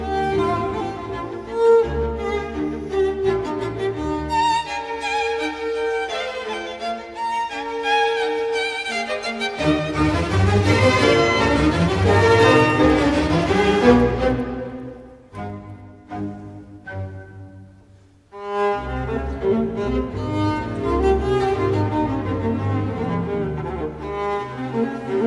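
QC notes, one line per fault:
12.2–15.9 s, resampler restarted on every block: a steady ticking at 10 Hz rides on the sound, one tick every 100 ms, and it is present only while there is signal. Each 100 ms block was rate-converted in isolation, which fits a 48 kHz to 24 kHz conversion. At every block edge the filter lacked the real neighbouring samples and worked from silence or wrapped-around data instead, leaving a small discontinuity that is heard as a tick.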